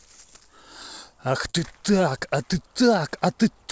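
At 1.50 s there's a short concealed packet loss lasting until about 1.56 s. Roughly 40 ms of the call arrived too late, so the receiver stretched the previous sound over the gap before easing back in. You hear it as a quick smear in the speech, against the call path's band limit of 8 kHz.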